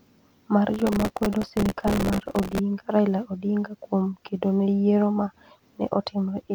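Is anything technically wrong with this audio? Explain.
Yes. From 0.74 to 2.59 s the speech carries a processor overload crackle. The processor keeps missing its deadlines for very short buffers, which points to something around a millisecond and a half each, and every miss replays a scrap of old audio with hard edges. Over those 1.85 s the many misses merge into a gritty tearing laid over the speech that stops cleanly when the load eases. A single dropout would be one isolated click or gap, not this dense run.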